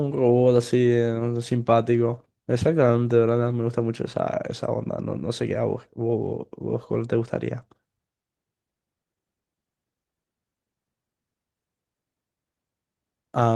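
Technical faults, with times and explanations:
6.09–6.11 s, lost packet rebuilt from error correction: there's a brief rough, noisy patch in the speech here, but no actual dropout. The patch sounds like a single lost packet, roughly 20 ms, that got covered by the low-bitrate backup copy riding inside the next packet (Opus in-band FEC). The decoder played that cheaper copy instead of silence, so the sound keeps going but loses some detail for that one frame.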